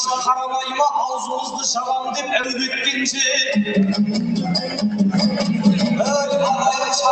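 From the start and all the way through, held sounds and decaying tails keep sinking while sharper onsets mostly come through, so the level pumps and flutters by about 5 dB and the ambience thins out between attacks. This is a noise suppressor built for speech left running on non-speech material: it reads sustained tones and reverberant decay as background noise and turns them down, then releases when a new transient arrives. The top end stops around 8 kHz, consistent with an Opus call link at a modest bitrate.

At 2.41 to 2.45 s there is a brief smear, a short stretch where the sound seems to hang on itself for an instant before blending back. This is short concealed packet loss: about 20 ms of audio failed to arrive in time. The decoder filled the gap by extending what it had just played, then crossfaded into the real signal once packets resumed, leaving the small wobble at the join.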